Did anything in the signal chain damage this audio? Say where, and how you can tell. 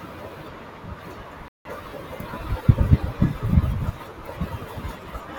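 Yes: a playback stall, likely the player starving of data, cuts the speech to silence from 1.48 to 1.65 s, a 169 ms gap before it resumes.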